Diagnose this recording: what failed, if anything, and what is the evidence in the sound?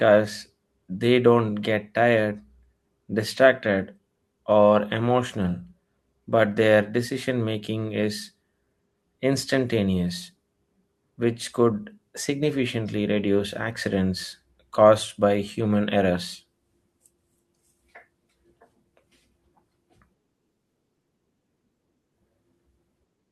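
Nothing failed here: listening through the whole recording, there's no fault at any stage of the chain to point to.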